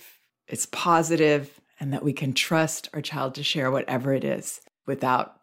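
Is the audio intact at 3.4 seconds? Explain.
Yes, the audio is intact at 3.4 seconds, with no fault at that moment.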